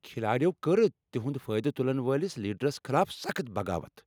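Nothing technical stands out in this short bit of speech; there's no fault to point to anywhere in it.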